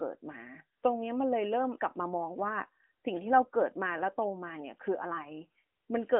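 Nothing here registers as a fault, just speech carried over what sounds like an AMR narrowband mobile codec, with the top end stopping at around 3.8 kHz and the light coding texture you'd expect from a decent-rate phone call.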